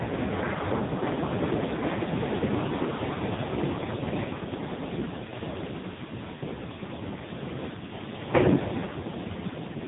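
Speech runs through an AMR narrowband mobile codec for the whole clip, with nothing above 3.8 kHz, so sibilants and consonant detail are gone. The codec rebuilds each 20 ms frame from a vocal-tract filter excited by a handful of pulses, and here the damage is heavy: the voice sounds buzzy, thin and synthetic. That degree of coarseness fits one of the lowest AMR-NB modes, around 5 kbps.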